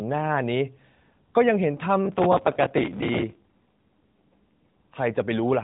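Speech over an AMR narrowband mobile link, with nothing above 4 kHz and only light codec roughness at its normal rate. From 2.06 to 3.43 s there is processor overload crackle. A gritty tearing rides on the speech and stops once the load passes. The processor keeps missing its buffer deadlines, and each miss replays a scrap of old audio with hard edges. The texture fits buffers of about 5 ms, with something like a hundred missed. From 3.67 to 4.75 s comes an AMR rate drop. The voice turns buzzier and more synthetic, but the band stays the same and there is no gap. The quality points to the codec stepping down from 12.2 to about 5.9 kbps, likely because a weak radio link pushed bits into error protection. It then recovers.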